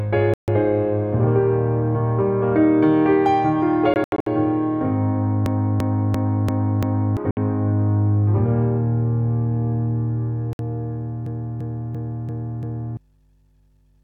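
Short silent gaps at 0.34 to 0.48 s (about 142 ms), scattered holes from 3.94 to 4.27 s (the longest about 81 ms), and brief 61 ms gaps at 7.31 s and 10.53 s are likely Bluetooth dropouts. Packets arrived too late, so the audio cuts out and resumes further on. On a waveform these are flat-line holes; a spectrogram shows blank vertical columns.

From 5.46 to 7.17 s and again from 11.26 to 12.97 s, a system hang loop repeats one 341 ms slice five times, a 2.93 Hz repetition that fits a 16384-sample buffer. Roughly 1.5 s of audio is lost each time. A spectrogram shows identical repeating blocks.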